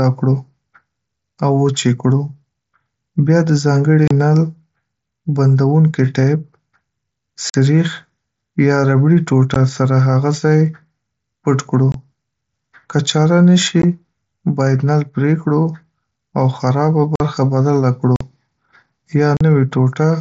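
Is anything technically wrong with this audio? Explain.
Yes. The speech has unconcealed Bluetooth headset packet loss, heard as eight short dropouts: 4.08–4.11 s, 7.50–7.55 s, 9.54 s, 11.92–11.95 s, 13.82 s, 17.16–17.20 s, 18.16–18.21 s and 19.37–19.41 s. Each gap lasts between 15 and 45 ms, which fits runs of lost 7.5 ms frames on the wideband mSBC link. No concealment fills the holes, so silence or an idle pattern replaces the speech. The edges are abrupt and can click, leaving the speech briefly chopped.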